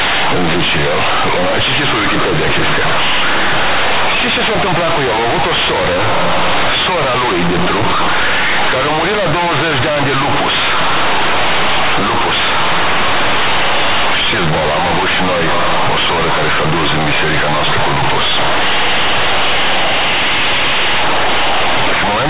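From start to finish the speech is companded audio read as linear: mu-law bytes reach the output as plain 8-bit samples without expansion. Every sign change jumps across half the range, so quiet passages blare as loudly as loud ones and pauses fill with harsh noise. Unlike ordinary clipping, the buzz persists through silence.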